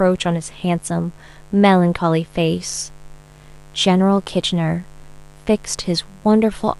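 A steady, raspy mains buzz runs under this speech from start to finish, sitting roughly 30 dB below the voice. It's built on 50 Hz, but the edge comes from the upper harmonics climbing well into the kilohertz range. That sawing quality points to sharp switching spikes, two per mains cycle, getting into the signal path through something like a dimmer, a rectifier or a lost shield connection.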